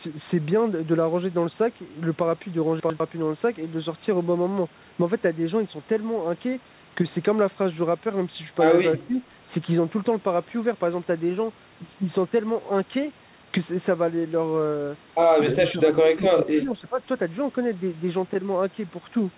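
Chunks out of order at 2.8 to 3.0 s jumble this speech recording: one 100 ms chunk plays a slot late, so the sound briefly scrambles at the hard joins. Speech suppressed in double talk is the likely cause of the level dips at 9.07 to 9.19 s and 15.71 to 15.87 s, each only a few decibels, and at 16.14 to 16.99 s, where the voice dips over most of that stretch, by as much as roughly 15 dB, as an echo canceller turns down the talker along with the echo. Nothing is heard above 4 kHz, which fits the narrowband G.711 A-law call path at 64 kbps.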